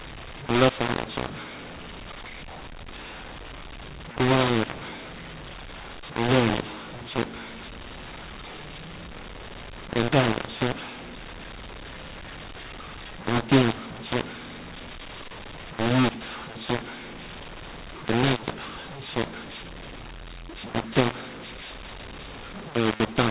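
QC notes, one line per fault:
throughout: mu-law and A-law mixed up. The speech was coded with mu-law but expanded with the A-law curve, scrambling sample levels, so it sounds harsh and gritty and pauses fill with hiss. Plain G.711 quantisation noise, by contrast, stays faint and falls silent in gaps.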